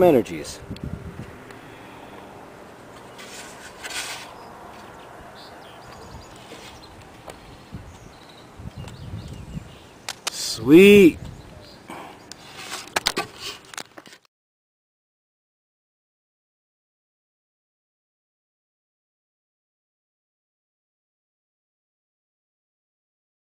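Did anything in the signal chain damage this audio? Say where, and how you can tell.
Yes. From 10.07 to 10.37 s, a burst of harsh, uneven scratching and rustling sits over the sound for about 0.3 s, quite loud at roughly 10 dB below the programme level. This is cable scratch noise, and the stage is likely the analogue wiring: a worn cable, connector or control shifted during recording, and its contact resistance jittered rapidly, injecting dense, irregular noise into the signal until the contact settled.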